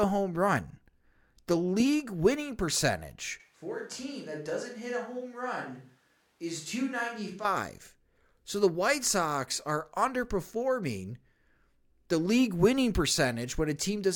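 The close microphone's feed most likely dropped out at 3.4 s, just after "league winning percentage," and the speech recording falls back to a microphone much further from the talker until 7.45 s: a switch to a distant microphone. Across that stretch the sound turns abruptly roomy and hollow, loses low end, drops around 10 dB in level and carries more room noise, about 35 dB below the speech, before snapping back to the close sound.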